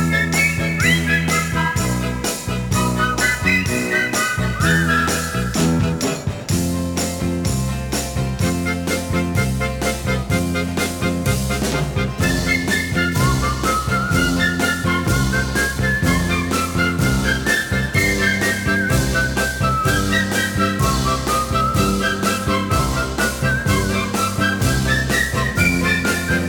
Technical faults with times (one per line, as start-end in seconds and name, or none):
0.00-26.48 sample clock jitter